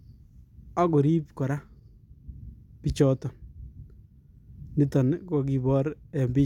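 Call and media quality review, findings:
No technical faults are audible in the speech signal; level, continuity and timing hold steady across the recording.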